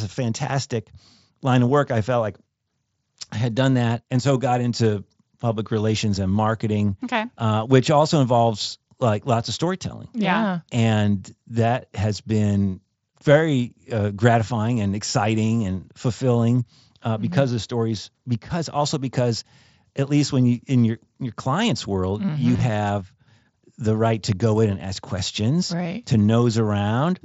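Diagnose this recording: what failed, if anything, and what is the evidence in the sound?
At 22.54 to 22.60 s there is a brief buzzy, slightly held tone with a small warble as normal sound resumes. This is concealed Bluetooth headset packet loss on the wireless link between headset and phone, carrying wideband mSBC audio. Roughly 37.5 ms of audio went missing across 60 ms, the longest gap 22.5 ms, which fits several short packets being dropped. The receiver filled each hole by repeating the best-matching recent stretch of waveform, which produces that tonal buzz.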